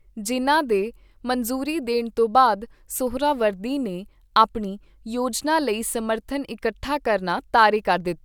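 No technical faults can be heard anywhere in the speech.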